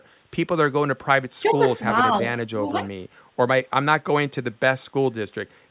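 From 0.75 to 1.59 s the speech is pulled down in pieces, roughly half a second in all, dropping by about 35 dB at its deepest. This is likely speech suppressed in double talk, where an echo canceller gated the talker along with the far side. On the waveform the envelope collapses in chunks, and on the spectrogram the bands thin to near silence. A shallower dip of about 5 dB, lasting a fraction of a second, follows between 2.59 and 2.79 s.

From 2.85 to 2.92 s a faint delayed copy of the speech appears, lagging by 0.37 s and sitting about 30 dB below it. This is an echo leak, likely residual loudspeaker pickup that got past cancellation. It shows as a weak, shifted ghost of earlier spectral patterns, all under the 4 kHz ceiling of the band-limited call path, which points to G.711 A-law at 64 kbps.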